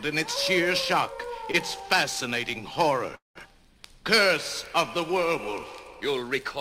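The audio has two timing faults of the jitter-buffer kind. At 1.51 s to 1.56 s there is a short stall from a late packet. The sound at that point is held for about 20 ms, with a slight buzz or dip, and then carries on from the same place. Nothing is lost, but everything after it now sits 20 ms later than it should. That fits one packet arriving after its playout deadline, with the receiver stretching the last sound to cover the gap.

A call audio freeze follows at 3.15 s to 3.38 s. The sound continues briefly as a fading buzz or hiss and then drops to silence for about 150 ms, about 199 ms of inserted fill in total. Playback then resumes exactly where it stopped, so nothing is lost and the rest of the audio is pushed about 0.2 s later. The likely cause is a burst of packets held up in transit that emptied the jitter buffer until they arrived.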